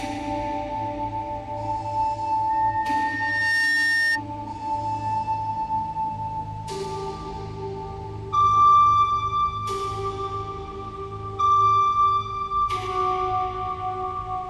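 From 2.50 s to 4.21 s there is a loudspeaker feedback squeal. A microphone is picking up the loudspeaker it drives, and at 1.8 kHz the loop gain rises above unity, so that frequency feeds on itself. It swells over roughly a second into a steady, piercing tone that ends up about 5 dB above the rest of the sound, and it stops at 4.21 s.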